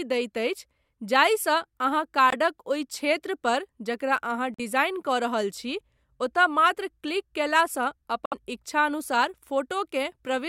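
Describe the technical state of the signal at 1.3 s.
Around 1.3 s the speech is intact, with no dropout, distortion, glitch or other fault at that point.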